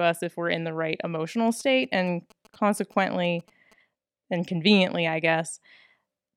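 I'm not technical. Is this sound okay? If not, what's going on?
No. From about 1.51 to 3.73 s, between "in the right emotional" and "and conveniently I", there are GSM signalling bursts: a faint, galloping dit-dit-dit of short buzzes sitting well below the speech. A nearby 2G mobile phone was sending brief radio bursts, which points to it checking in with the network rather than being in a call. The audio wiring picked up that radio energy and turned it into a buzz at about 217 Hz.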